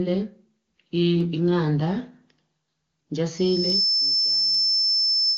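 At 1.21 s and again at 2.72 s there's a sharp, single click. That's dropped samples: a tiny fraction of a millisecond of audio likely went missing, so the waveform leaps straight to a later value with no sound actually lost.

From 3.36 s a loudspeaker feedback squeal takes off. The mic is picking up the speaker it feeds, and at 5.3 kHz the loop gain tops one, so that single tone swells over about half a second into a piercing whistle. It sits roughly 5 dB above the speech and keeps going right to the end of the clip. Two more of those same clicks land inside it, at 3.70 s and 4.55 s.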